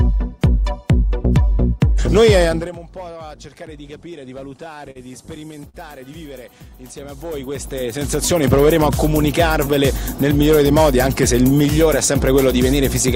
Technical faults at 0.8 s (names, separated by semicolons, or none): none